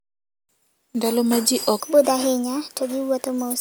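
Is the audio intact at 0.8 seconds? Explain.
Yes, the speech at 0.8 s plays through cleanly, with no dropout, click, distortion or other fault at that moment.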